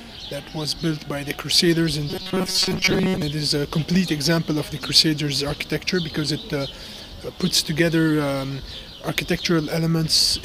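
From 2.09 to 3.22 s the sound goes robotic, a rigid metallic buzz pinned at 188 Hz. That's likely repeated short buffers: audio arriving too seldom, so a chunk of about 5.3 ms gets looped and most of the real signal in that stretch is skipped.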